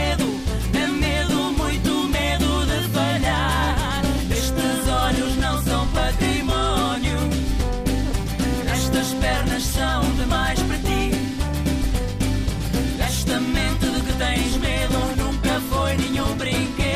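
From 5.03 to 7.61 s, current drawn by the USB bus in 125-microsecond microframes leaks into the audio through power or ground, producing USB whine: a fixed-pitch tone at 8 kHz sitting around 40 dB below the sound.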